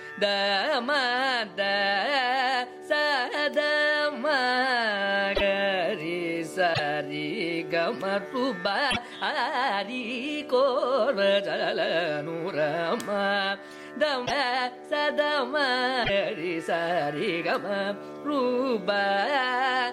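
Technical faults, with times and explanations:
5.34–5.41 s, 6.73–6.80 s, 8.90–8.97 s, 14.25–14.31 s and 16.03–16.10 s, broken MP3 bit reservoir: the sound skips forward, then a brief chirp, noise burst or short hole of about 60 to 70 ms follows. That fits two or three 26.1 ms frames. The likely cause is dropped frames leaving later frames to decode from the wrong bytes.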